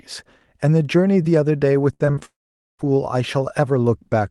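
From 1.93 to 2.23 s, the speech turns choppy and robotic. This is repeated packet loss. Five gaps fall in that span, the longest 65 ms. Each hole is patched by stretching the last sound, so about half the stretch is synthetic fill.

At 2.25 s, the audio gives way to a brief fading buzz or hiss, then silence until 2.81 s. This is a long network dropout, likely from packets never arriving. Roughly half a second of speech is simply gone when sound resumes.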